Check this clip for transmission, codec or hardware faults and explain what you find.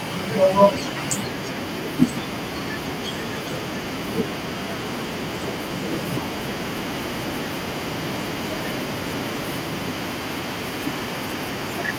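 There is one fault: feedback echo between two devices, from 6.78 s to 11.45 s. The speech returns at a fixed interval of roughly 0.4 s, peaking at about 10 dB below the direct speech. A second device in the room is replaying this one's audio, and its microphone is feeding it back in, a path that no single echo canceller covers.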